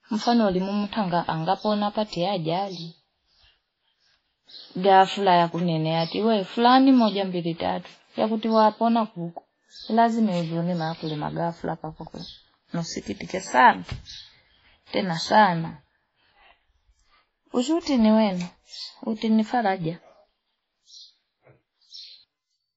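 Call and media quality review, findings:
Transcoding between lossy codecs, throughout the speech. Band ends near 7.7 kHz, with layered artefacts from each codec heard together. Likely cause: WMA at a low rate, near 24 kbit/s, then AAC-LC, then WMA again, each re-encoding earlier damage and keeping the lowest cut-off.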